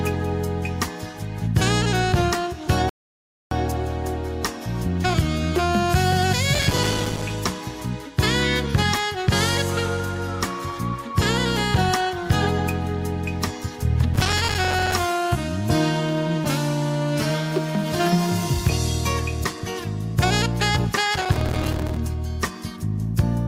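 At 2.89 s the audio drops to silence and picks up again at 3.51 s exactly where it left off. That's a rebuffering stall: the player ran dry and waited for more data, adding about 0.62 s without losing anything. Later there are three bursts of processor overload crackle, at 6.55–7.30 s, 14.14–14.93 s and 21.14–21.97 s. In each one, dozens of tiny silent gaps land back to back. That points to a buffer of a few milliseconds repeatedly missing its deadline, which gives a gritty tearing texture over the sound until the load eases.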